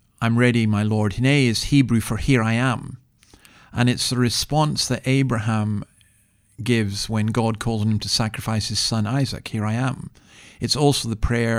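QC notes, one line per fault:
Nothing to flag here; the speech comes across with no faults to note.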